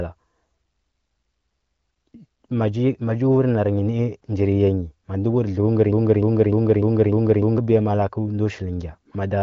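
From 5.93 s to 7.58 s the speech falls into a broken-record loop: a fragment of about 0.3 s repeats exactly, back to back, six times, and whatever should have been said in that stretch never arrives. The likely cause is a player or stream stalling and resending the last piece it held. The identical repeats and fixed period set it apart from an echo, which decays, or from jitter stutter, which repeats irregularly. The band-limited HD Voice AMR wideband character, with nothing above about 7.5 kHz, continues through the loop.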